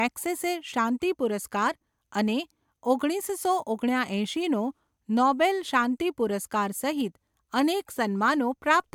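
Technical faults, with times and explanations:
No technical faults are audible in this speech.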